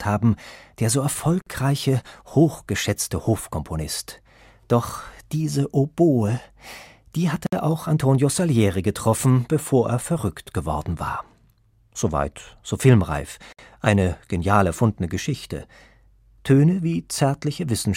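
Speech with a gap at a join of encoded pieces: 48 to 60 ms silences at 1.42–1.47, 7.47–7.53 and 13.53–13.59 s. Untrimmed encoder delay and padding cause them, and their exact 6 s spacing sets them apart from random dropouts.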